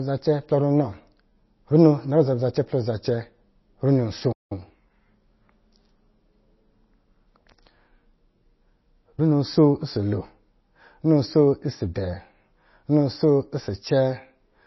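Throughout the speech, the treble is missing. Nothing reaches above 5.8 kHz. The sound is plainly watery and swirly, and consonant attacks are smeared. This is likely MP3 compression at a low bitrate, which fits roughly 24 kbps. With so few bits, the encoder drops weak frequency lines. These lines flicker on and off from frame to frame. It also cuts the top end at a fixed point.

At 4.32 s, just after "runo asoo", the sound stops mid-flow. The silence lasts until 4.52 s, with about 183 ms of dead output. This is a playback stall. The player likely ran out of data, or its thread was blocked. Output stayed silent until it recovered. The gap is clearly noticeable in the flow of speech.

From 4.52 s to 5.24 s, the speech comes out hurried. It runs at 1.25 times normal speed, yet the pitch stays normal. This is time-compressed catch-up after the stall. The player shortens its backlog by cutting out small pieces of audio and cross-fading the joins. 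The result sounds rushed over those 0.7 seconds.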